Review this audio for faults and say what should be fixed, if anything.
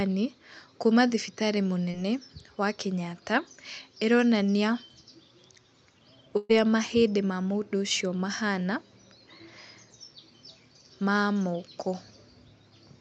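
A short concealed packet loss occurs at 1.91 to 1.95 s, just after "kuuma thibitarĩ". About 20 ms of audio never arrived in time. The receiver extended the preceding sound to cover the gap, leaving a brief smear. Prevent it with a more stable network path or in-band forward error correction.

A burst of packet loss runs from 6.37 to 6.51 s, just before "mahĩndĩ ma mũndũ ũcio". About 120 ms is missing. Concealment filled the entire gap with a fading continuation of the last sound, with no silence. Prevent it with redundancy and a deeper jitter buffer.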